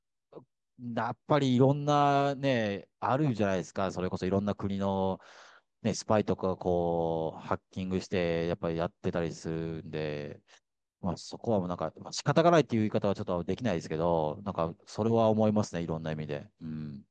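No audible faults: the speech runs without dropouts, clicks, distortion or level jumps anywhere in the clip.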